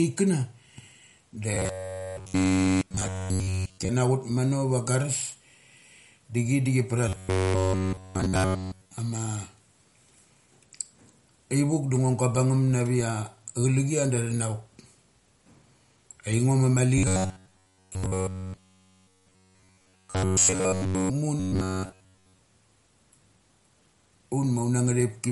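Throughout the speech, MP3 compression, likely at a low bitrate around 48 kbps, leaves plainly audible watery swirl and smeared attacks. A spectrogram shows a hard, flat ceiling with nothing above 11.2 kHz, and speckled gaps where weak lines drop out frame by frame.

From 1.54 to 3.89 s, 7.09 to 8.98 s, 16.98 to 21.10 s and 21.40 to 22.40 s comes robotic sound from repeated short buffers. It is a rigid metallic buzz at 93.8 Hz, likely from a chunk of about 10.7 ms being replayed. The waveform shows identical repeating cycles, and the spectrogram shows evenly spaced horizontal harmonic lines. The final stretch is somewhat less uniform.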